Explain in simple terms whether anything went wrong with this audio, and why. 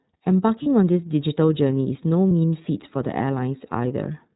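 iLBC codec, throughout the clip: the speech went through a narrowband phone-call codec that drops everything above 4 kHz, so it sounds muffled, a little rough and synthetic. It packs each 30 ms slice separately, and the damage is plainly audible.

Lost iLBC frames, at 0.63 to 0.67 s and 2.29 to 2.32 s: a 30 ms stretch of audio went missing each time. The decoder patched the hole by repeating the last bit of voice mixed with noise, giving a brief buzzy, held sound before the speech snaps back at once.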